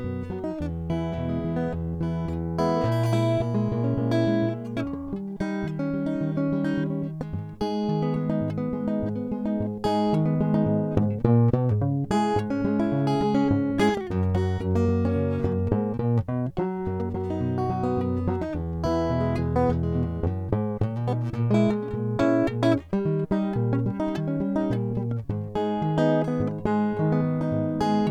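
No faults are audible anywhere in the music.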